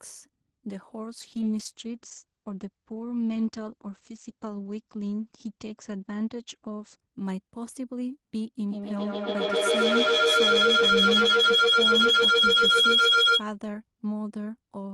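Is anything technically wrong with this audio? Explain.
Yes, there are two faults.

From 1.20 s to 7.05 s there is a call bitrate drop. The encoder's rate falls from 32 to 11 kbps, so the speech is coded coarsely and cut off above 8 kHz instead of 20 kHz. It sounds muffled and watery throughout, with no gaps, which separates it from packet loss.

From 8.59 s to 13.47 s there is a feedback howl. Sound loops between a nearby microphone and loudspeaker, gaining level on each pass until a tone near 3 kHz peaks about 9 dB above the speech, with the loop repeating roughly every 150 ms. Unlike an echo, it grows rather than fading.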